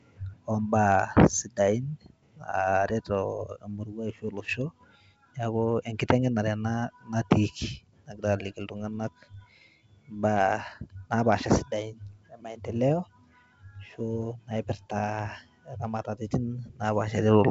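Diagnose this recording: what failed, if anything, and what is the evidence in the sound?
Nothing has failed: the speech comes through a G.722 wideband telephone path whose content stops at about 7.8 kHz, and the upper band carries at most a faint hiss, which fits the full 64 kbit/s mode.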